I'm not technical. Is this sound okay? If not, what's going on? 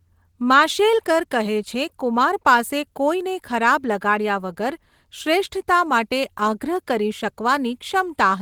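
Yes, this sound is okay, with nothing going wrong in it.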